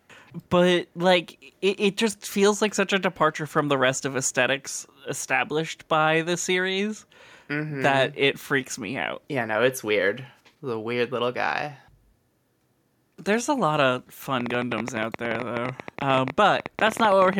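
Just after "a lot of", at 14.41 s, a train of clicks starts and runs to 17.34 s. About forty similar pulses tick at an uneven pace, averaging 14.7 per second. They peak roughly 10 dB above the speech. Interference is the likely cause.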